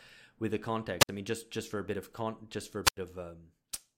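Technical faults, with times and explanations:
0.99–1.09 s and 2.84–2.97 s, wireless microphone squelch dropout: a short burst of hiss, then a hole of near silence lasting about 61 ms after "with the" (the voice comes back on "I mean just just"), and about 88 ms after "just for a". The analogue FM radio link faded, the receiver's noise rose, and its squelch muted the output until the signal recovered.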